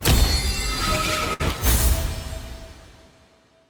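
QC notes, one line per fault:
1.33–1.42 s: short stall from a late packet. The jitter buffer ran dry, so the last sound is stretched about 63 ms and then resumes. Nothing is lost. The spectrogram shows a smeared, frozen band with a faint buzz or dip.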